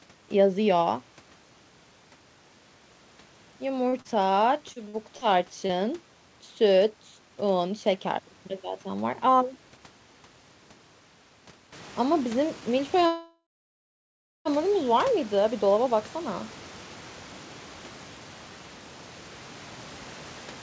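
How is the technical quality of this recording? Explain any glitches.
The speech has four separate call-transmission glitches. The wideband call coding cuts the audio off at 8 kHz, which fits G.722 at 64 kbps, and the room noise steps up by about 13 dB around 11.5 s.

From 3.89 to 5.24 s there is repeated packet loss with a robotic sound. Six holes, the longest 53 ms, were patched by extending the preceding sound, which covers about 14% of that stretch. The result is choppy. A spectrogram shows smeared, repeated harmonic slices interrupting the normal speech texture.

At 5.66 to 5.72 s there is a short concealed packet loss. About 30 ms never arrived and was filled by continuing the last sound before blending back. It is heard as a brief smear or wobble. On the waveform it appears as a short, overly regular patch of cycles.

From 9.15 to 9.78 s a jitter buffer speed-up runs the audio at 106% of normal speed. 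The receiver trimmed roughly 50 ms by cutting out pitch-period-sized pieces to reduce delay. The speech sounds slightly hurried while the pitch stays unchanged. A spectrogram shows compressed syllable timing with no shift in harmonic spacing.

From 13.06 to 14.48 s there is a call audio freeze. The last sound is stretched into a fading buzz or hiss, then about 1 s of silence, and the speech resumes with nothing lost. The likely cause is packets being held up until the jitter buffer ran empty. The waveform shows a decaying tail followed by a flat line.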